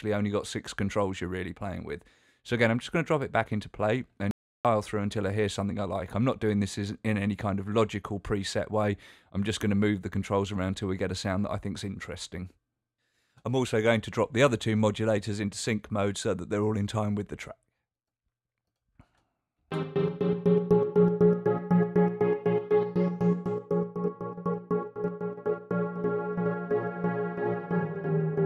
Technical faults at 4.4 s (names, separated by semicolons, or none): audio dropout to silence